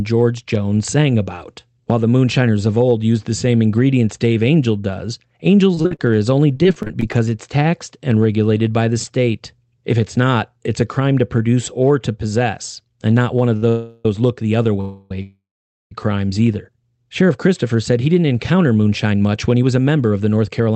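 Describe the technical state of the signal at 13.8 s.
At 13.8 s a call audio freeze runs from 13.69 to 14.06 s: with packets likely delayed, the last sound is stretched into a fading buzz or hiss about 0.36 s long, shown as smeared, decaying spectrogram bands before the audio resumes intact.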